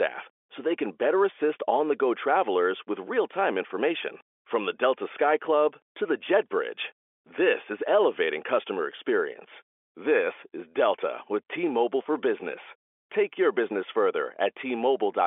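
No faults can be heard anywhere in this speech.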